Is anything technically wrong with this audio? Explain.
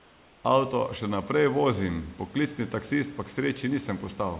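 Yes, there's one thing. For the first 0.44 s, the background is comfort noise in place of the real room sound: a smooth, featureless hiss about 3 dB quieter than the room tone after it. The sender's voice detector likely went quiet, and the receiver filled the gap with synthetic noise.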